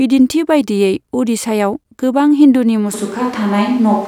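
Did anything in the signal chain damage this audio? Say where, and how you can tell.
Yes. At 2.94 s the capture path changes and stays changed to the end: the close microphone's feed drops out and the recording most likely falls back to a distant microphone, a switch at the analogue input stage. From that instant the speech turns roomy and hollow, with thinner bass, while the overall level stays about the same. The room noise rises to roughly 25 dB below the speech because the farther capsule picks up more of the space.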